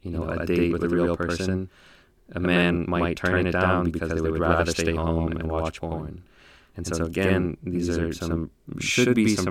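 Throughout the speech, every syllable arrives twice, about 85 ms apart and at equal strength: a channel delay (doubling). One channel ran late by a long buffer, consistent with a 4096-sample offset, and the two were summed to mono, so the late copy stands apart as a distinct slap. Room echo would decay and trail off, and a short offset would merge into a hollow comb-filtered tone. Here the repeat is single, equally loud and clearly separate.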